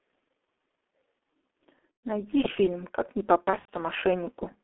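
Throughout, the G.723.1 codec narrows the speech to roughly 250 Hz to 3.5 kHz and leaves it muffled and hoarse, which fits about 6 kbit/s. VoIP packet loss concealed by the speech codec appears at 1.79–2.01 s and again at 3.44–3.70 s. In each, the decoder extrapolates over gaps of up to 120 and 90 ms, producing buzzy or noisy, fading smears.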